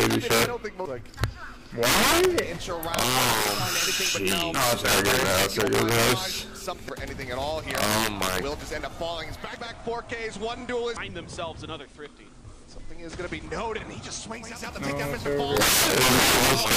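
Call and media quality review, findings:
Integer overflow: violent cracks at 0.00–0.45, 1.24, 1.83–2.39, 2.94–6.13, 7.71–8.39, 15.57–16.76 s. Unclamped sum or gain wraps peaks (about 1–16 dB over) to opposite sign. Waveform: peaks flip polarity.

Digital radio blending to analogue: 9.31–14.75 s, 458 ms crossfades to FM. Hiss roughly 35 dB down, level about 1 dB lower. Spectrogram: raised noise floor.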